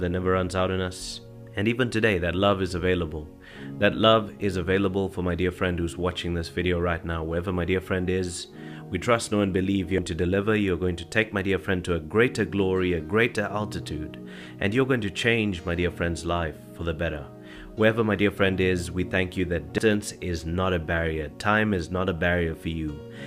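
At 9.98 s and again at 19.78 s the sound skips forward abruptly, as if about a fifth of a second has been cut out and the two sides butted together with no gap. The regular spacing, roughly ten seconds apart, points to audio missing between chunks: the recording was likely handled in 10-second blocks, and a short stretch was lost each time one block closed and the next opened.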